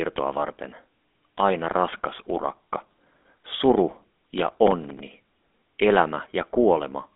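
GSM full-rate codec coding runs through the whole clip. The codec rebuilds the speech from a vocal-tract model driven by a sparse, regularly spaced pulse train, which fits the 13 kbps full-rate scheme. The damage is plainly audible as a buzzy, gravelly roughness on the speech. The band is held to roughly 250 Hz to 3.5 kHz, with nothing above 3.8 kHz, so the sound is thin and lacks any air or sibilant sparkle.

Processor overload crackle then runs from 4.31 to 5.00 s. The processor fell behind and failed to deliver a rapid string of short audio buffers on time, a pattern that points to buffers of around 5 ms, with about 15 missed across the stretch. Each missed buffer came out as a brief hard-edged dropout to silence. Strung together, they form a gritty burst of crackle and tearing over the speech that stops once the load eases.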